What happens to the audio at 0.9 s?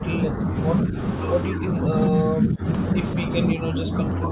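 Between 0.83 and 0.97 s, roughly 150 ms, the speech dips by about 10 dB. This is likely speech suppressed in double talk: with both ends talking at once, the echo canceller cannot separate this talker from loudspeaker echo and pulls the level down. It sounds like a brief duck or thinning of the voice. On the waveform the envelope visibly narrows there. On the spectrogram the band below 4 kHz, the ceiling of this narrowband call, fades briefly.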